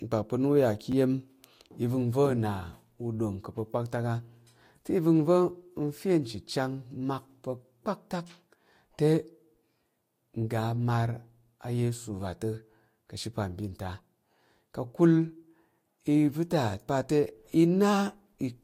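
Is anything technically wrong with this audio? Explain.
Yes. A repeated buffer at 0.92 s: fresh audio arrived late, so an 11.6 ms chunk, which fits a 512-sample buffer, played twice, giving a brief click-like stutter in the speech.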